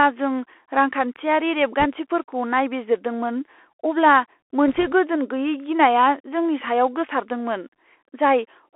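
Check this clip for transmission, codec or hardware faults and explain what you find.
Two kinds of fault are present: a Bluetooth CVSD headset codec across the whole speech recording, and two short bursts of bit errors on the Bluetooth voice link.

The Bluetooth CVSD headset codec runs throughout, and its damage is plainly audible. The passband sits between about 300 Hz and 3.4 kHz, which fits a narrowband 64 kbps CVSD stream. CVSD encodes each sample as a single up-or-down bit with an adapting step size, so fast, loud high-frequency movement outruns the step. The result is scratchy s sounds, slope-overload distortion on bright consonants and a fine granular hiss under the speech.

Bit errors on a Bluetooth voice link occur from 1.80 to 1.85 s, at an error rate of around one percent, and again from 4.68 to 4.93 s, at somewhat under one percent. In CVSD every bit carries the same small weight, and the decoder's leaky integrator lets an error fade out quickly, so flipped bits produce no sharp clicks. 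Instead each burst adds a rushing, crackly noise over the speech, heavier in the first, denser burst and spread over a longer stretch in the second.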